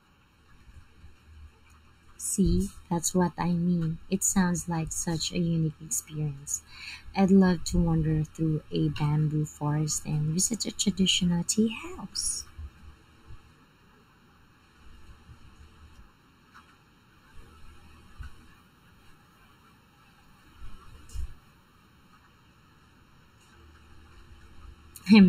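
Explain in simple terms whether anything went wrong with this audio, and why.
Something did go wrong here: the speech sounds hollow and phasey from start to finish, as if spoken into a tube. That is channel delay (comb filtering). One stereo channel arrives less than a millisecond after the other, and when both are mixed to mono, matching sound cancels at a regular series of pitches, the first near 700 Hz. Unlike a swirling flanger, these gaps never move, and unlike plain muffling, the top end isn't simply missing.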